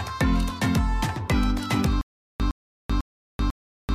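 At 2.01 s the audio breaks into a stutter with silent gaps that runs to the end. A fragment of about 111 ms plays, then drops to digital silence for about 386 ms, and the same fragment returns every 497 ms, four times in all. This is likely a stalled player or stream re-serving its last buffered piece at each retry before running empty. The sound that belonged in those intervals never arrives.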